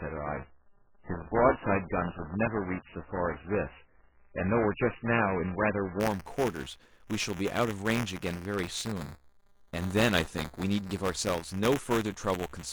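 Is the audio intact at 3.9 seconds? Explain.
No. Through the first 6 s, including 3.9 s, the adaptive stream is still on its low-bitrate start: nothing above 2.9 kHz, stronger codec artefacts, consistent with roughly 8 kbit/s MP3. Unlike a dropout, it jumps to 128 kbit/s MP3 at 6.0 s without any gap. Buffer tearing also runs the whole clip. Writer and hardware cross inside each period, splicing in a small slice of audio from about ten milliseconds earlier. This produces a 200 Hz rattle that, unlike mains hum, vanishes whenever the speech stops.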